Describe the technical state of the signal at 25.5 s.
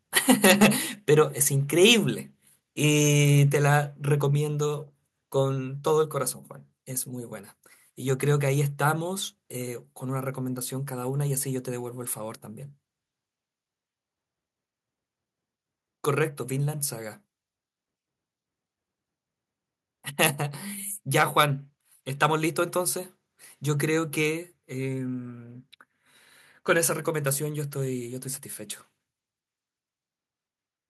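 At 25.5 s the speech signal is intact, with no technical fault present at that moment.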